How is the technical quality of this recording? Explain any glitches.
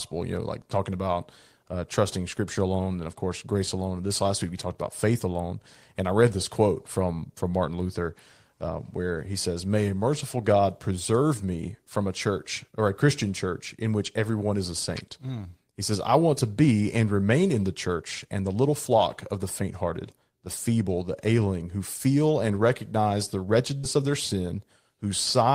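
One glitch stands out near the end. At 23.77 to 23.85 s, after "feel and recognize the", there is a burst of packet loss. The last sound is stretched and faded for about 58 ms, then about 60 ms of audio is skipped before "of their". On a spectrogram this shows as smeared, decaying bands ending in an abrupt edge.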